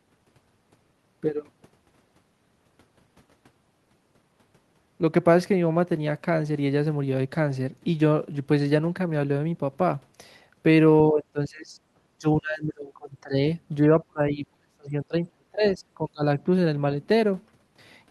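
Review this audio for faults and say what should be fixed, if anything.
Speech suppressed in double talk at 11.06 to 11.76 s, 12.07 to 13.34 s and 13.88 to 16.23 s: the speech sinks sharply in level, by roughly 25 dB at first, then about 30 dB, and up to about 40 dB in the last and longest stretch, which loses around two seconds of audio. The likely cause is an echo canceller that could not tell this talker from loudspeaker echo while both sides spoke, so it pulled the whole signal down. Tuning the canceller's double-talk detection, so that near-end speech keeps its level while the far end is active, would prevent this.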